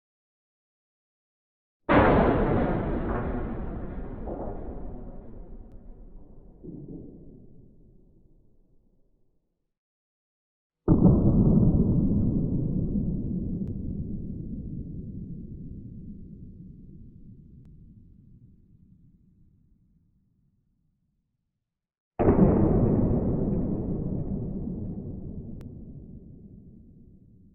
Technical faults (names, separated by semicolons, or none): audio missing between chunks